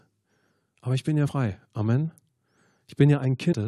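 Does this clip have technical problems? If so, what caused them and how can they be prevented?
Yes. Two brief glitches cut into the speech, from 1.27 to 1.29 s just after "ich bin ja" and from 3.52 to 3.54 s. Both come from damaged data in the compressed stream: corrupted bytes make the decoder misread those frames and lose sync until it finds the next valid header. Checksummed transfer and verified, error-protected storage of the compressed file would prevent this.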